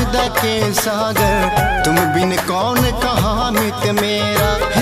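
From 0.26 to 0.28 s there is a burst of damaged data in a compressed stream. Part of the encoded stream at that point was wrong, so the decoder either misread the affected frames or rejected them, lost its lock on the frame structure and had to hunt for the next valid frame header before resuming normal output. The result is a brief disruption of about 20 ms, heard as a chirp, squawk, click or short hole in the sound.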